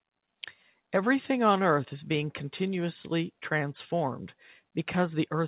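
No technical faults are audible.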